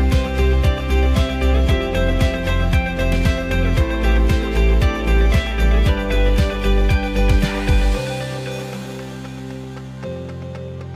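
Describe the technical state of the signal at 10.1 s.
At 10.1 s the signal carries periodic clock jitter, running from 8.52 s to the end of the clip. The converter's clock is being shaken at around 3 kHz, so every component grows sidebands that far above and below it, strongest for high frequencies, giving a rough, metallic edge. On a spectrogram, mirrored copies flank each band at that spacing; the waveform looks essentially unchanged.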